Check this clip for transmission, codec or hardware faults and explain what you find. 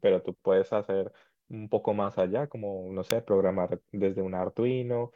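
One fault stands out: an electrical switching spike at 3.11 s in this speech clip. It is a sharp snap, about 2 ms long, peaking fairly loud at around -10 dBFS. Its likely cause is a nearby switch, motor or static discharge arcing briefly and coupling into the audio line. Unlike a dropout or codec glitch, the speech carries on unbroken underneath. The snap is added on top rather than replacing or cutting out any of the audio.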